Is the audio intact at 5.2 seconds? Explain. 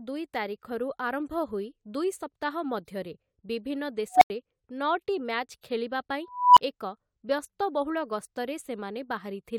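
Yes, the speech at 5.2 seconds plays through intact, with no dropout, click, distortion or other fault at that moment.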